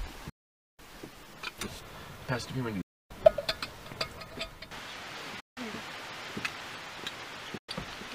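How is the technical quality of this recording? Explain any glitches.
The recording is marred by four short silences. They sit at 0.29 to 0.79 s, 2.81 to 3.11 s, 5.40 to 5.57 s and 7.58 to 7.69 s. Each gap is shorter than the last, from about half a second down to 0.1 s. These are likely Bluetooth dropouts. Audio data failed to reach the headphones in time and was discarded. The sound cuts out abruptly, then resumes further along, as if it had kept playing.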